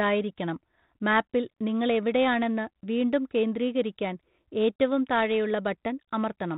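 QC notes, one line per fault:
No faults found in this speech clip. The G.726 ADPCM path at 32 kbit/s can be heard as a band limit with nothing above 4 kHz and a faint added noise that follows the speech level.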